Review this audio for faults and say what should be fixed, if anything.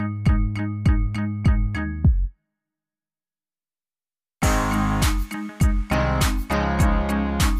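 No faults; nothing needs fixing.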